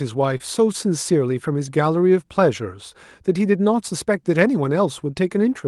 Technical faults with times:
0.37-0.42 short concealed packet loss

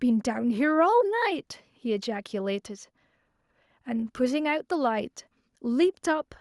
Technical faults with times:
none

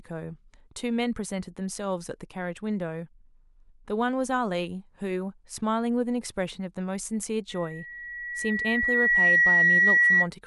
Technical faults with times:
7.49-10.28 loudspeaker feedback squeal

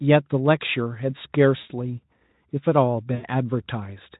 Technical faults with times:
1.57-1.71 VoIP packet loss concealed by the speech codec
3.15-3.26 VoIP packet loss concealed by the speech codec

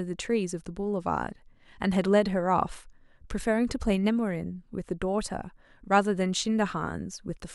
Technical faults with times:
none

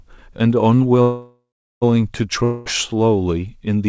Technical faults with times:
1.02-1.84 call audio freeze
2.44-2.68 long network dropout

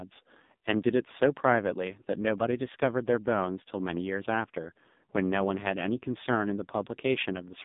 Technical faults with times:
0.00-7.65 AMR narrowband mobile codec

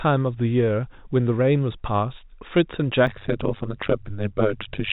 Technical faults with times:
3.07-4.92 overlap-add ripple

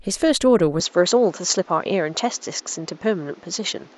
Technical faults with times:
0.80-3.98 input switched to a poorer device

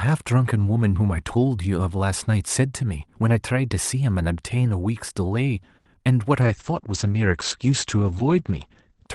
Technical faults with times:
5.77-5.87 short stall from a late packet
5.93-6.07 short concealed packet loss
6.43-9.14 call bitrate drop

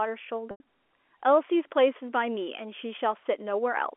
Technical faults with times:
0.51-0.60 packet loss with pitch repetition

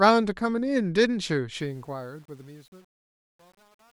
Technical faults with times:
1.60-3.94 truncation distortion on a fade

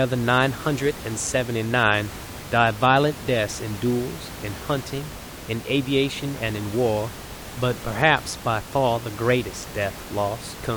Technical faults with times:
none

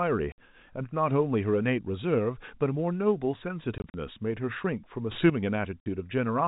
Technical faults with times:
0.32-0.38 packet loss filled with silence
3.78-3.94 packet loss filled with silence
5.11-5.30 sudden gain jump
5.80-5.86 packet loss filled with silence

